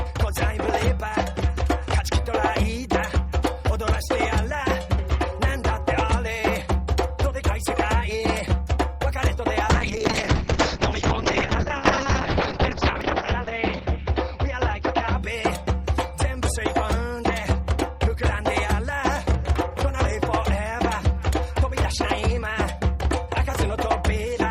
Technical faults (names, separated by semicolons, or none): call bitrate drop